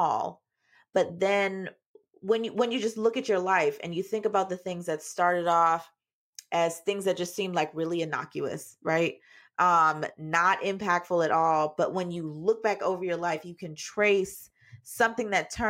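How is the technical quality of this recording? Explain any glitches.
Technical quality is sound: the recording runs as one continuous, undisturbed signal, with no glitches to explain.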